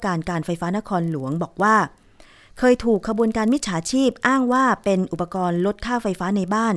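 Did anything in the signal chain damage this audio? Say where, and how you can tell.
Yes: a resampler restarted on every block, throughout the speech, at the sample-rate conversion stage. The 48 kHz to 24 kHz conversion was run on each 40 ms block separately, so every block edge lacks true neighbouring samples and leaves a small error, heard as a 25 Hz ticking buzz riding on the signal.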